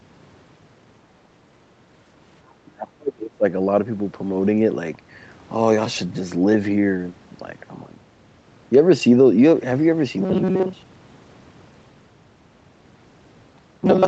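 Speech, with two separate faults. From 2.63 to 3.45 s the voice sinks by roughly 35 dB, with about 0.7 s of that span affected. This is likely speech suppressed in double talk: with both ends talking at once, the echo canceller could not distinguish the near talker from loudspeaker echo and attenuated the whole signal rather than risk passing echo. From 10.20 s to the end of the clip the voice turns into a stiff metallic drone pitched at 188 Hz. This is robotic sound from repeated short buffers, likely caused by audio arriving too infrequently for playback. To cover the gaps, the same short block is looped while the real audio is dropped, and roughly two-thirds or more of this stretch is repetition. The 188 Hz buzz fits a looped segment of about 5.3 ms, so the voice keeps only its rough word shapes. Throughout the clip, nothing is present above 8 kHz, which matches the band limit of the call path.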